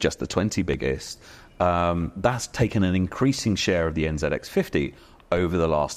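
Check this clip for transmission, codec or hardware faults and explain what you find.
Two hardware faults are audible in this speech clip.

From 0.52 to 1.81 s, just before "that's taken an increasing", seven CD scratch ticks recur about five times a second. A disc blemish defeats error correction on each rotation. The spectrogram shows thin vertical broadband lines, each only a few milliseconds wide.

At 5.37 s, a DC step produces a low thump as the waveform's zero line suddenly shifts. A 5 Hz high-pass then pulls the offset back, giving a visible jump with a slow exponential return.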